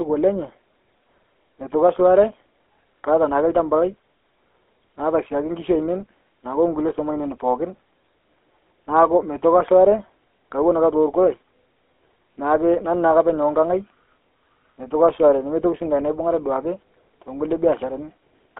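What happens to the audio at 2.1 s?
At 2.1 s the speech sounds buzzy and gravelly, with a coarse, rasping texture and a thin, boxed-in tone. That is GSM full-rate codec damage, and it runs through the whole clip rather than starting there. The codec models the vocal tract and excites it with sparse, regularly spaced pulses, which produces the roughness, and the line passes only about 250 Hz to 3.4 kHz. The sound fits the 13 kbps GSM full-rate coder.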